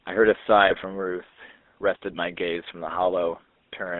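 A buzzy, gravelly roughness runs through the whole clip. The speech is squeezed into a narrow telephone band from about 250 Hz to 3.6 kHz, with no air or sparkle above it. That roughness is the signature of the GSM full-rate codec, which fits a 13 kbps link. The codec rebuilds the voice from a vocal-tract filter driven by a sparse, regularly spaced pulse excitation, so fine detail turns into a coarse, grainy buzz.

At 0.66 to 0.74 s, and again at 2.88 to 2.99 s, the voice briefly breaks into squawks, pops and a gargling smear. These are GSM bit errors: corrupted bits reached the decoder and scrambled the filter, pitch or gain values it uses to rebuild the sound. For those moments the spectrum bends or the level jumps. The first burst lasts about 80 ms, which fits four damaged 20 ms frames, and the second lasts about 110 ms, roughly five frames. The error rates point to around 1.7 % and 1.2 % of bits flipped.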